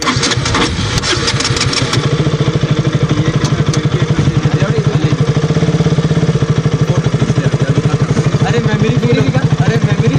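Hard clipping runs throughout. The signal arrives about 4 dB beyond what one stage can pass, so its loudest peaks, around two percent of the audio, are cut flat. The result is crisp crackle on peaks, unlike the rounder thickening of soft saturation.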